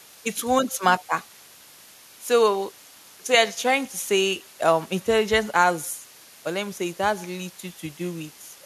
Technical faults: low bit depth with dither; echo leak

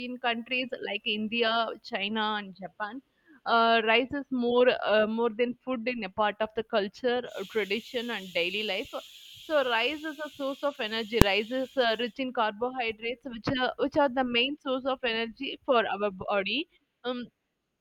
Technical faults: invalid numbers at full scale

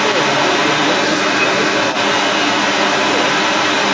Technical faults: other side's voice leaking through

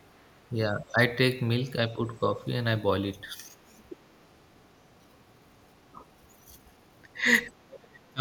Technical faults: speech suppressed in double talk; other side's voice leaking through

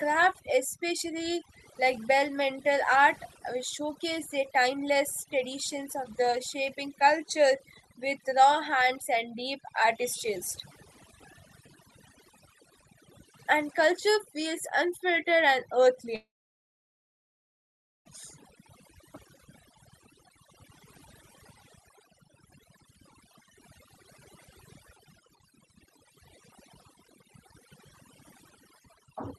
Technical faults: overdone noise removal; long network dropout

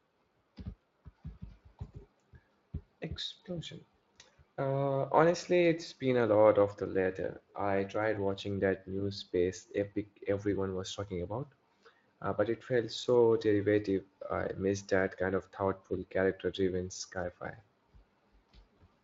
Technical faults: none

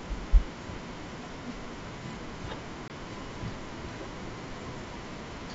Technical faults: packet loss on an ADPCM call

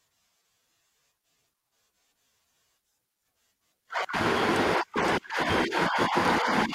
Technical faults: repeated buffer

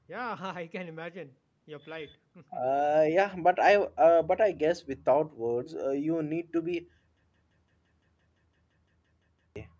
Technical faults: system hang loop

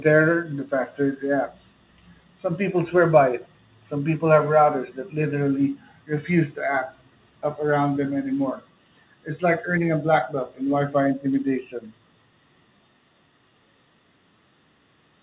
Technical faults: none

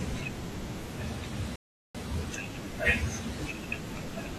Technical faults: rebuffering stall

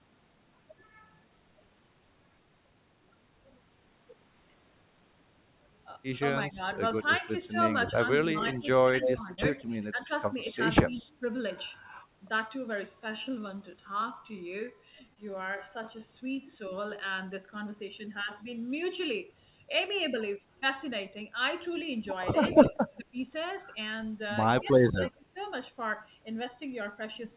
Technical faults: speech suppressed in double talk; echo leak; short concealed packet loss; time-stretched section

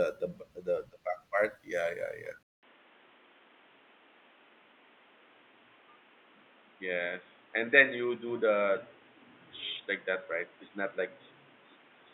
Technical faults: input switched to a poorer device

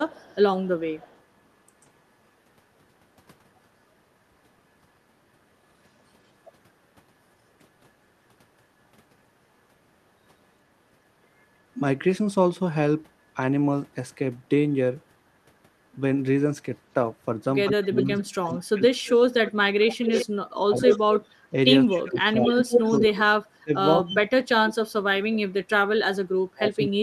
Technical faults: echo leak; speech suppressed in double talk

